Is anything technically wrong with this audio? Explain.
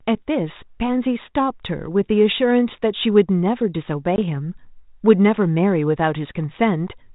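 Yes. At 4.16 to 4.19 s there is packet loss on an ADPCM call. Apparently a single packet, 20 ms of audio, never arrived. The gap was filled with silence, so the speech drops out with a hard-edged hole. Because ADPCM codes only the difference from a running prediction, the decoder's predictor and step size lost track of the sender's during that gap. When the speech resumes it comes back slightly distorted, then settles within some tens of milliseconds. The underlying G.726 ADPCM path, whose light coding hiss fits 32 kbit/s, is not itself the fault.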